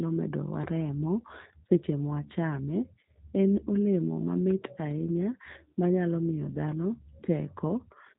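From start to finish the speech carries G.729 codec damage: nothing above 3.8 kHz, and a rough, synthetic buzz from pulse-modelled excitation, which fits an 8 kbit/s stream.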